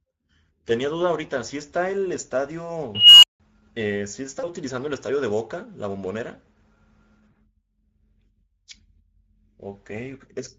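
The whole clip carries Speex codec damage that's plainly audible: the speech sounds hoarse and noisy, because at a setting that fits roughly 16.8 kbps the CELP coder has too few bits to model the excitation properly. Anything up top past 4 kHz comes across as a shaped hiss rather than real detail, so the voice has that thin, grainy game-chat quality throughout.

At 2.95 s an unstable filter kicks in. Its recursive coefficients went bad, so the output feeds on itself. You hear a squeal around 3 kHz swelling over about 0.28 s until it clips hard. Then the numbers overflow and the sound drops out completely for about 0.17 s, through 3.40 s, before the filter resets.

Next comes VoIP packet loss concealed by the speech codec, at 4.39 to 4.49 s, where two frames (40 ms) went missing, and again at 7.31 to 7.37 s with a single 20 ms frame lost. In each gap the decoder keeps replaying its last pitch and filter with the gain stepping down, so the speech smears into a fading buzzy tone or coloured noise, and it stays a bit weak and off for a short stretch after real packets resume.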